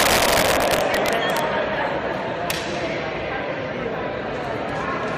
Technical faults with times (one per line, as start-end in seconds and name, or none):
0.00-1.39 integer overflow
2.50 integer overflow